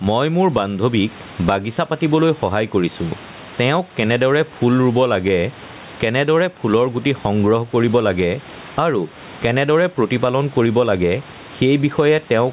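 Gain pumping runs through the whole of this speech recording, with the level swinging by something like 15 dB. The room background sits about 32 dB below the talker, while the speech itself sounds flattened and squashed. The likely cause is input gain set far too high for the microphone, with a fast compressor or limiter clamping down on each peak. Because nothing reaches above 4 kHz, the band is narrow, which fits a G.711 call path at 64 kbps.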